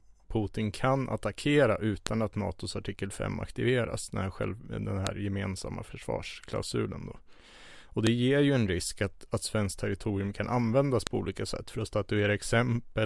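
Sharp, loud clicks land at 2.07, 5.07, 8.07 and 11.07 seconds, just before "gemensamma försvarsklausulen då", before "ger ju en risk", and between "svenskt territorium kan användas" and "på olika sätt för". This is a file header played as audio: the speech was joined from 3-second WAV pieces whose header bytes stayed in and play as samples. Unlike random dropout clicks, these snaps fall at exact 3.0-second intervals regardless of what the speech is doing.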